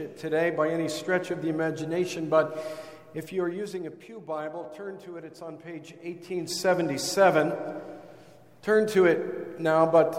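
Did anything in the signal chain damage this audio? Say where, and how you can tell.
Yes: zipper noise between 5.81 and 6.83 s, introduced where gain is applied per buffer with no smoothing. The level changes by about 15 dB in 1 dB steps, around twenty a second, so a ticking rides the level change. The waveform envelope shows a staircase, and the spectrogram shows faint vertical lines at each step.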